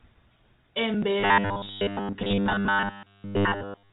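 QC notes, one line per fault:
1.2 to 3.92 s, robotic sound from repeated short buffers: From 1.2 s to the end, the speech becomes a rigid metallic buzz fixed at 100 Hz that only loosely follows the speech. The likely cause is new audio arriving too seldom, so playback fills the gaps by looping the last slice of sound, about 10 ms long to match the 100 Hz buzz. Most of the real audio, roughly two thirds or more, is skipped and never heard.
2.43 s to 2.46 s, packet loss with last packet repeated: About 30 ms of audio went missing, which points to a single lost packet. The receiver covered the gap by replaying the previous packet until fresh audio arrived. The spot sounds like a small blip layered on the ongoing robotic buzz, all within the 4 kHz telephone band of the G.711 coding.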